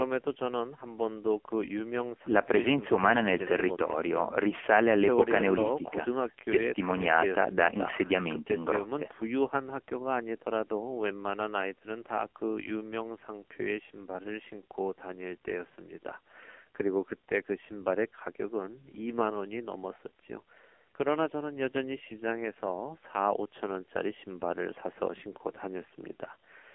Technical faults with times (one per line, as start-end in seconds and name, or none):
0.00-26.74 AMR narrowband mobile codec